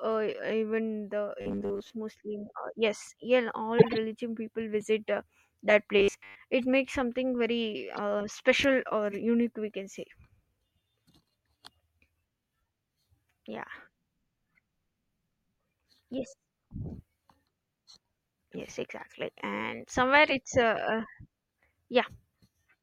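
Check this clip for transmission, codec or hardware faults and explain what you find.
Yes, two kinds of fault are audible in this speech: a robotic buzz in two stretches and six brief corrupt-frame bursts.

Robotic sound from repeated short buffers occurs at 1.41–1.92 s and 5.99–6.36 s. The speech becomes a rigid, metallic 100 Hz buzz that loosely tracks the speech. This is likely from a starved stream looping a 10 ms slice while most of the real audio is skipped. A spectrogram shows evenly spaced 100 Hz harmonic bands, and the waveform shows a short repeating cycle.

Corrupt frames were decoded at 3.78–3.98 s, 5.08 s, 6.58 s, 7.94–7.99 s, 9.11–9.14 s and 20.29–20.37 s. Damaged data is decoded anyway, so energy lands at the wrong frequencies and is heard as squeaks and noise blips. The burst near 3.8 s is loud, peaking around −5 dBFS, and the rest are much fainter. On a spectrogram each burst appears as a short, misplaced smear, and the waveform shows a spike.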